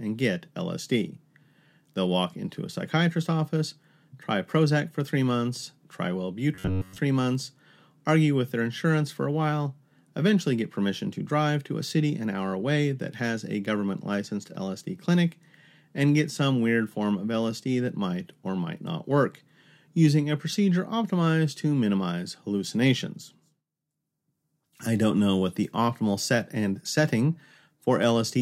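From 6.55 to 6.99 s, new audio likely arrived too seldom, so a chunk of about 11 ms was looped over most of that stretch while the real speech was skipped. This robotic sound from repeated short buffers imposes a rigid, metallic 94 Hz buzz that only loosely follows the voice.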